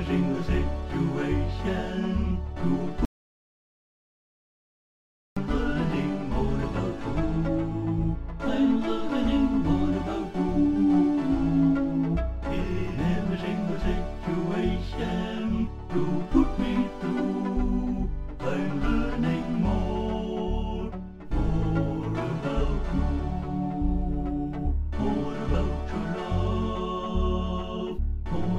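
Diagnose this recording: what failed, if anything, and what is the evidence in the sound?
The input path failed, most likely at the device or link feeding the recorder, producing an audio dropout to silence from 3.05 s to 5.37 s. The sound stops abruptly mid-flow and resumes just as abruptly about 2.31 s later, and the gap is digital silence with no room tone or noise floor. That points to the source disappearing while the recorder kept writing silence, so the material in that stretch is unrecoverable.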